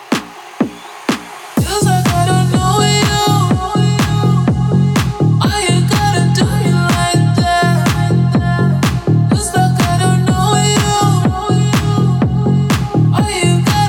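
No technical faults can be heard anywhere in this recording.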